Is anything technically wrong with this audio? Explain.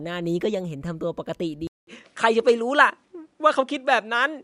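Yes. At 1.67 s the speech drops out for 200 ms, then returns duller, with nothing above 10.4 kHz, a level shift of around 5 dB and a faint new noise floor. That's likely an input switched to a poorer device, a narrower-band microphone taking over.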